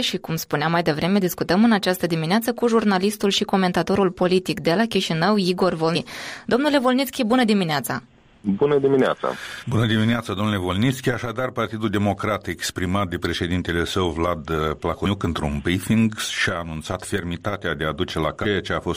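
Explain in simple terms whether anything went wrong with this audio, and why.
Damaged data in a compressed stream causes short glitches at 5.95 s, 9.62 to 9.64 s, 15.05 s and 18.44 to 18.46 s. Corrupted bytes made the decoder misread frames and lose its place.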